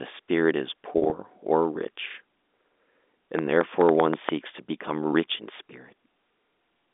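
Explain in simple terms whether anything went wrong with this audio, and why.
Two things go wrong here. First, between 0.92 and 1.12 s there's packet loss with pitch repetition. Bits of the speech went missing in transit, about 100 ms in all, spread across 200 ms, with no single gap longer than 40 ms. To cover each hole, the receiver replayed the last cycle of the voice, so instead of silence you hear the sound briefly stick and turn slightly buzzy, like a held note.

Second, from 3.39 to 4.30 s there's a train of clicks. About seven sharp ticks land on top of the audio at an uneven pace, roughly six or seven per second. They all sound alike, the pattern of something injecting pulses into the line, likely electrical interference or a faulty connection. They stand out clearly over the speech, the way a dripping tap cuts through a conversation.

Underneath, the narrow, phone-like sound of the telephone coding comes through as it should.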